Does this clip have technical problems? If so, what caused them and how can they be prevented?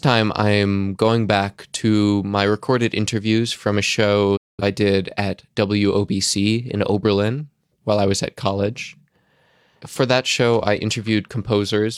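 Yes. A digital broadcast dropout mutes the sound from 4.37 to 4.63 s, fading out over 8 ms. About 213 ms of programme is simply gone, which fits roughly five lost frames. On a waveform this appears as a flat line; on a spectrogram, a clean vertical blank band. Stronger reception, such as better antenna placement, prevents it.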